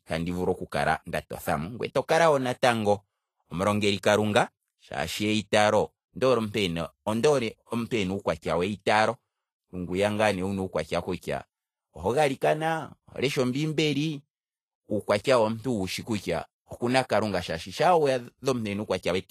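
A speech recording with Vorbis compression artefacts that run through the whole clip and are plainly audible. Nothing is present above 14.2 kHz, and the upper band that remains sounds hissy and grainy. Fine treble detail has been replaced by noise of similar energy, which roughens tonal sounds and softens consonant onsets. The likely cause is low-quality Vorbis encoding, with the coarse treble quantisation fitting a bitrate around 34 kbps.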